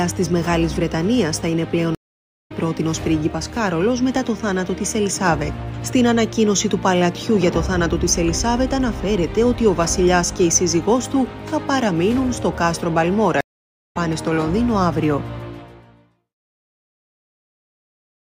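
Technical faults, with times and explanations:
1.95 to 2.52 s and 13.41 to 13.97 s, stream reconnect: the connection drops twice, leaving gaps of 0.54 s and 0.53 s of silence. The player then reconnects and spins up a fresh decoder mid-stream. It picks up at a later point than where it left off, skipping roughly a third of a second the first time and roughly half a second the second time, so the sound jumps forward rather than simply pausing.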